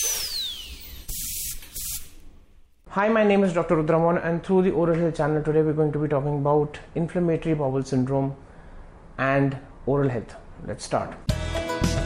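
Nothing here trips the ear as a technical problem: the audio runs along steadily with no dropouts, glitches or sudden jumps to point to anywhere along the way.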